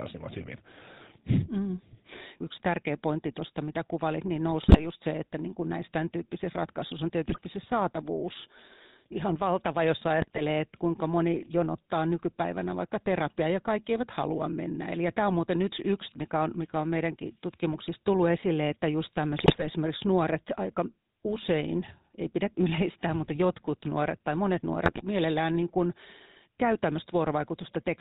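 GSM full-rate codec coding runs through this whole speech clip, plainly audible as a buzzy, gravelly roughness with nothing above 4 kHz. The vocal-tract model driven by sparse, regularly spaced excitation pulses fits the 13 kbps full-rate coder. GSM bit errors break in at 4.62–4.87 s, 7.28–7.40 s, 10.22–10.41 s, 19.38–19.67 s and 24.84–25.02 s as squawks, pops and gargling. Corrupted filter, pitch or gain values warp the spectrum or spike the level across several frames, consistent with an error rate of roughly 3 to 4 percent.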